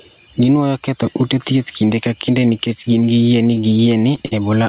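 Gain pumping runs through the whole clip: the gain is pulled down by roughly 10 dB under each loud sound, likely from excessive gain and a fast limiter. From 3.55 to 4.33 s, repeated stalls (stutter) break the flow: five short holds, the longest 50 ms and about 93 ms in total, stretch the preceding sound while the jitter buffer refills, over the narrowband G.711 A-law path with nothing above 4 kHz.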